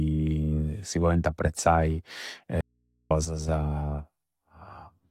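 Just after "si pointi apprezzai", at 2.61 s, the speech cuts out abruptly for about half a second, until 3.11 s. This is an audio dropout to a faint residue. Only a low mains hum remains, roughly 45 dB below the speech. The likely cause is a lost signal feeding a live path.

From 3.25 to 3.49 s, the level falls suddenly by about 6 dB, then recovers. This is one channel dropping out. One stereo side was likely lost briefly, so the mono sum carries only half of the shared sound.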